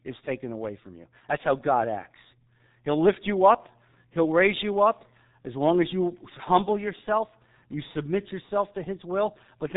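From start to finish the speech carries heavy G.723.1 codec damage. Nothing reaches above 3.8 kHz, and the slow-updating voice model at what sounds like roughly 6 kbit/s leaves the voice muffled and hoarse, with consonants smeared together.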